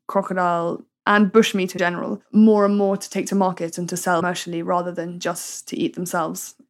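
Speech with brief garbled skips at 1.77–1.80 s and 4.19–4.22 s, each about one 26.1 ms frame long, likely from a broken MP3 bit reservoir after lost frames.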